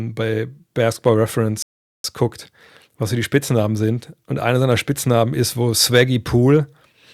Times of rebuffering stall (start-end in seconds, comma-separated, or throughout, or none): 1.62-2.04